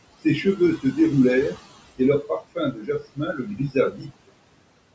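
Noise suppressor artifacts run throughout: the room noise is pulled down by about 21 dB between phrases and rises under the speech, unlike steady room noise. Speech cut by the noise suppressor follows from 0.77 to 0.97 s and again from 2.23 to 4.11 s. Roughly a tenth of a second, then around 0.7 s in total, is swallowed, dropping by up to about 15 and 19 dB, so soft consonants and word endings fade with the background instead of the whole signal breaking off as in a dropout.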